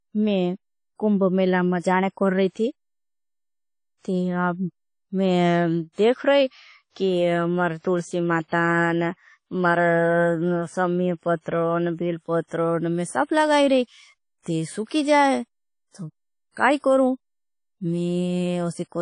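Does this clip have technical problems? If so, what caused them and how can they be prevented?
Yes. Throughout this speech clip there is a ringing, washy quality, with a hiss that swells and fades along with the speech, and nothing is present above 10.1 kHz. The likely cause is WMA compression at a low bitrate, plausibly around 32 kbps. The transform encoder spreads its quantisation noise across long blocks and zeroes weak spectral detail, which dulls the top end and leaves that breathing hiss. Encoding at a higher bitrate or with a better codec avoids this.

Pre-echo appears twice. A brief hiss runs ahead of a sharp onset from 13.24 to 13.29 s, between "पत्र मैं सब" and "लगाई रही", and again from 16.51 to 16.57 s, between "ती सुकी जाए तो" and "काई करूँ". The smear lasts about 48 ms and 55 ms. Each attack fell late in a transform block, so noise sized for the loud onset also filled the quiet moment before it, softening the attack. 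An encoder that switches to short blocks at transients, or a higher bitrate, prevents this.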